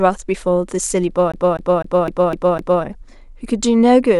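A speech recording with the CD stuck on one turn: a scratch keeps knocking the laser back one track, so from 1.32 s to 2.84 s the same 0.25 s slice of audio repeats six times, each jump marked by a brief mute, giving an even, rapid stutter.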